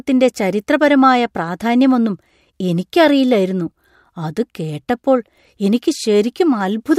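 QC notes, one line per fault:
No faults heard in this clip.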